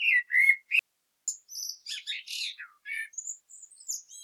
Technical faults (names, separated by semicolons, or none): audio dropout to a faint residue